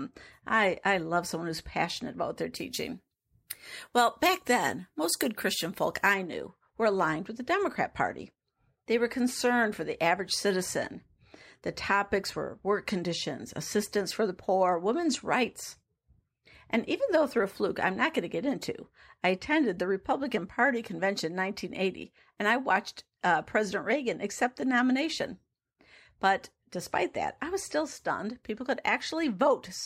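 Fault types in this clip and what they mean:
pre-emphasis left on: A treble lift, which fits the 75 µs FM curve, was never undone by matching de-emphasis. From 2.56 to 6.14 s the highs sit about 14 dB above 1 kHz at 10 kHz, making the speech thin, glassy and sharply sibilant.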